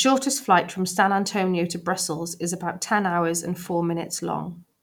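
Nothing stood out on listening to this recording of speech.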